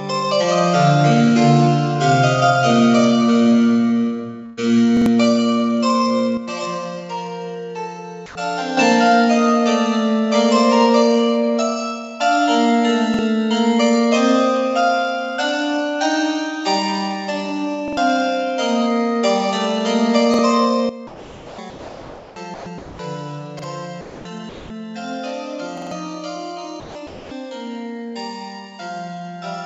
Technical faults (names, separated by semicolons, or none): burst of packet loss; repeated buffer; sudden gain jump; comfort noise in place of the background; sound dropped by the voice detector; sound chopped by the voice detector